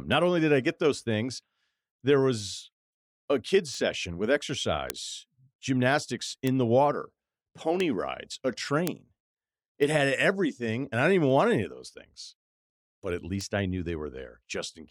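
Seven bit error spikes tick through this speech, at 3.75, 4.90, 6.47, 7.80 (right before "rides a"), 8.87 (just after "rides a"), 9.83 and 13.41 s, that last between "but at" and "I knew". Each is a flipped bit in one to three samples, so the value jumps a power of two and snaps back. You hear a sharp broadband tick unrelated to the speech, loudest at 4.90 and 8.87 s (about −3 dBFS), faintest at 3.75 and 9.83 s (about −21 dBFS).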